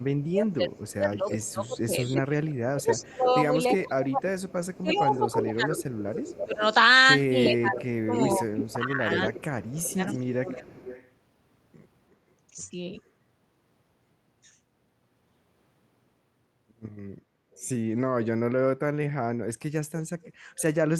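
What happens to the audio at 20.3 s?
From 20.23 to 20.62 s there is an echo leak: a faint, delayed copy arriving about 356 ms late, likely loudspeaker pickup an echo canceller missed, distinct from smeared room reverberation.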